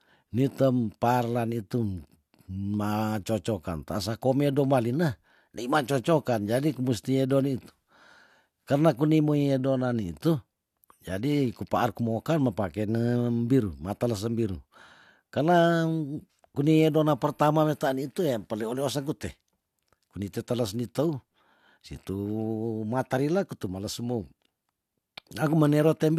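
Nothing stood out on listening to the speech recording.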